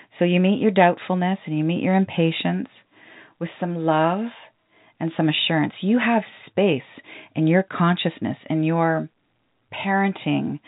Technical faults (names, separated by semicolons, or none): none